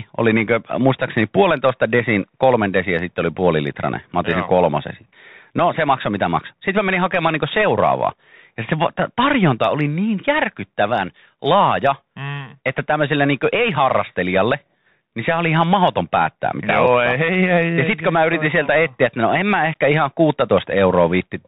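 From start to finish, the speech carries the sound of a Bluetooth CVSD headset codec. The audio has been squeezed into a narrow band, with nothing above 4 kHz. Each sample is reduced to a single up-or-down bit, and the step size adapts as it goes. Loud, bright sounds outrun the step and distort. S sounds turn scratchy. A grainy hiss sits underneath. The damage is plainly audible and fits a 64 kbps headset link.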